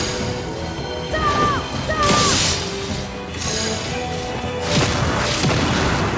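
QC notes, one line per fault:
No faults were found in this clip. The call microphone processing can be heard as normal: the lowest bass is trimmed and nothing reaches above 8 kHz.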